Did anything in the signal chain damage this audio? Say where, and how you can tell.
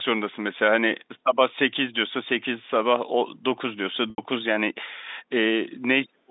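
Yes. At the network stage, there is packet loss with pitch repetition from 4.10 to 4.18 s. The voice holds on one slightly buzzy pitch for 80 ms instead of moving on, which fits four 20 ms packets lost in a row. The receiver's concealment filled the gap by looping the last pitch period of the telephone-band signal, fading it out over about 50 ms.

At the call-processing stage, from 6.05 s to the end of the clip, the voice drops away sharply. At its deepest it falls by roughly 40 dB, and the dip affects about 300 ms. This is likely speech suppressed in double talk. When both ends talk at once, the echo canceller cannot tell this talker from the loudspeaker echo, so it turns the near-end voice down along with the echo.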